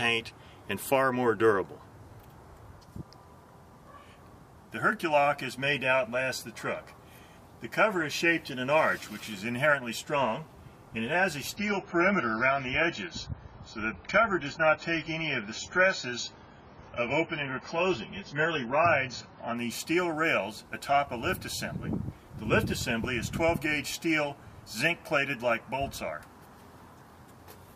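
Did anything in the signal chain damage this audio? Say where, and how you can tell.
Yes, at the network stage, where an adaptive stream dropped to a lower bitrate. From 11.56 s to 19.56 s the sound suddenly loses its top end. Nothing remains above 7 kHz, and codec artefacts grow more audible. There is no gap at either switch. The quality simply steps down and then back up after 8 seconds. The connection slowed, so the player fetched a leaner encoding. The narrow band points to a rate far below the surrounding audio.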